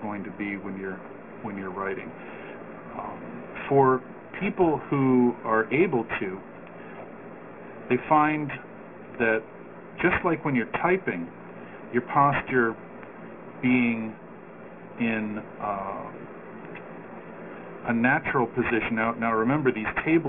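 From start to finish there's aliasing: everything above about 3 kHz has folded back down into wrong, unrelated pitches, which fits a drop to a 6 kHz sample rate without filtering first. The folded energy sits not far below the signal, so sibilant edges turn gritty and metallic, packed hard against the band edge.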